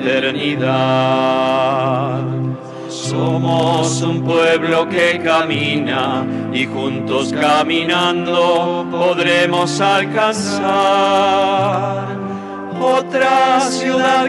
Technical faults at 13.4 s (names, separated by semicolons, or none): none